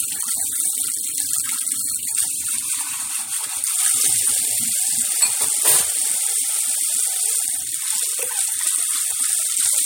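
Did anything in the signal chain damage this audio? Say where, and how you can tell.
Yes, at the codec stage: a corrupt frame decoded from 4.23 to 4.29 s, a brief patch of misplaced energy reaching close to full scale. Its 60 ms length points to roughly two damaged frames whose flipped bits were decoded as wrong gains and spectral values.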